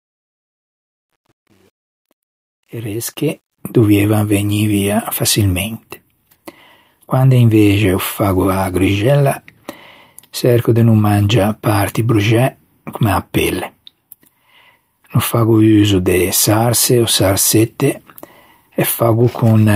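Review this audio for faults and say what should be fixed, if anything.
Truncation distortion on the fade-in runs from 0.0 to 3.58 s, worst before 2.72 s. Too few bits, about nine, leave quiet speech stepped and gritty. Fade at full resolution and add dither before reducing bit depth.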